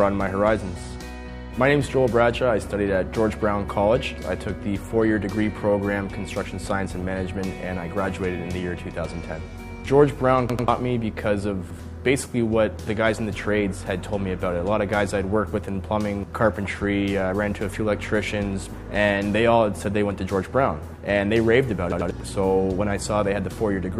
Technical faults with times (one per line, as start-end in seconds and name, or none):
10.50-10.68 repeated buffer
11.70-11.80 repeated buffer
21.92-22.11 repeated buffer